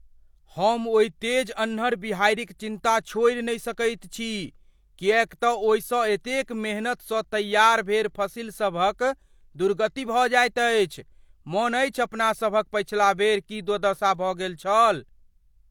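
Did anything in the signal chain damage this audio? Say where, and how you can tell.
Yes, at the codec stage, throughout: low-bitrate audio saved at a high bitrate. The speech has nothing above 18.5 kHz, yet its artefacts are far coarser than a genuine 192 kbit/s MP3 would leave. That points to a likely HE-AAC encode near 40 kbit/s, re-saved as MP3.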